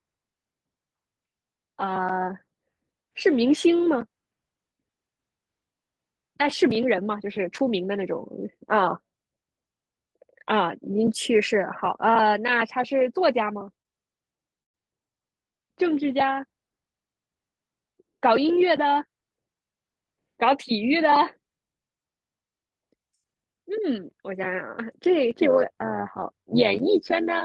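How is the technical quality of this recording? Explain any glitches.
The recording has three timing and processing faults, two brief interruptions close together in the middle and a metallic buzz over the last couple of seconds.

From 13.82 to 13.87 s there is a short stall from a late packet. A packet arrived after its playout time, the jitter buffer emptied, and the receiver stretched the preceding sound by about 29 ms before resuming exactly where it left off. Nothing is lost, but the sound lingers unnaturally. On a spectrogram the harmonics run flat and repetitive for that instant. In the waveform, a periodic copied cycle replaces normal variation.

From 14.63 to 14.76 s comes a call audio freeze, likely caused by packets being held up in transit until the jitter buffer ran dry. The receiver bridged roughly 112 ms, and nearly all of it, about 110 ms, is silence. The speech then carries on from the same point, so a pause is inserted and nothing is missing. 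The waveform shows a flat gap, and the spectrogram shows a clean vertical blank band.

From 25.31 s to the end there is overlap-add ripple. The audio was split into windowed frames and rebuilt with an overlap whose gains don't sum evenly, so the level swings about 11 dB once per frame, at around 100 Hz. The result is a metallic buzz with extra tones around each note of the speech. The waveform envelope shows regular scalloping. On the spectrogram, evenly spaced vertical striations cross all frequencies.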